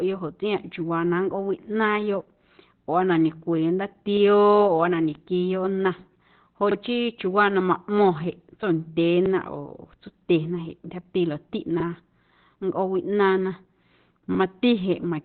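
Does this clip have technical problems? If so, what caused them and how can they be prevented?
Yes. Opus compression runs throughout: the speech sounds muffled and hoarse, with nothing above 4.2 kHz. That narrowband sound points to a bitrate around 12 kbps, which likely pushed the encoder into its SILK speech mode, heavily stripping detail. To prevent it, encode at a higher Opus bitrate so full bandwidth is kept.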